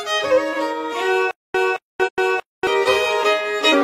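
A likely playback stall, with each retry replaying the last fragment before running dry, produces a stutter with silent gaps from 1.31 to 2.67 s: a 220 ms burst of the audio repeats four times, each followed by about 234 ms of digital silence, giving a steady 0.45 s cycle, and the material that should have filled that stretch is lost. Damaged data in the compressed stream also makes the decoder lose frame sync and hunt for the next valid header, which is heard as brief glitches at 2.03 to 2.09 s and at 3.69 to 3.75 s.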